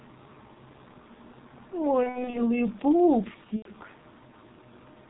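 The whole clip of speech carries G.723.1 codec damage, and it is heavy. The codec runs at 6.3 kbit/s in 30 ms frames. It discards everything above 4 kHz, so the speech sounds muffled. Its voice model updates slowly and coarsely. That leaves a hoarse, rough texture. Consonants smear into each other and lose their edges.

From 2.03 to 2.44 s there is VoIP packet loss concealed by the speech codec. About 150 ms of audio goes missing, scattered across roughly 300 ms. The longest gap is 60 ms. Those figures fit five lost 30 ms frames. For each gap, the decoder repeats its last pitch and filter at falling gain. The result is a stretched buzzy tone or coloured noise that fades. Because each frame builds on the previous one, the speech stays weak or distorted after the gaps. A second loss follows at 3.56 to 3.69 s. It spans 90 ms, which fits three frames. It produces the same fading concealment.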